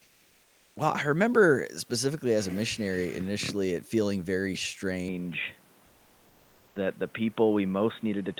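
Comfort noise in place of the background, from 0.00 to 0.75 s: the opening stretch has a smooth, featureless hiss about 4 dB quieter than the real room noise that follows, sitting around 38 dB below the loudest speech. The likely cause is discontinuous transmission. The sender stopped sending during the pause, and the receiver filled it with synthetic noise that only roughly matches the room, so the true background, with its detail, appears only once speech begins.

Input switched to a poorer device, at 5.08 s and lasting to the end: the speech abruptly loses everything above 3.8 kHz and turns dull and boxy, with no gap at the switch and roughly no change in level. A different, faint noise floor, roughly 35 dB under the speech, replaces the room noise heard earlier. This likely comes from the system changing to another microphone or a headset's call profile mid-recording.

Comfort noise in place of the background again, from 5.87 to 6.75 s: the pause on the new input is likely covered by about 0.88 s of the same synthetic hiss, again about 4 dB below the real background and about 36 dB under the loudest speech.

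Onset clipped by the voice detector, at 6.70 s: the speech resumes without its soft start, likely because about 50 ms of its beginning went unsent before the detector reacted. The comfort noise stood in for that beginning, so the sound jumps in abruptly.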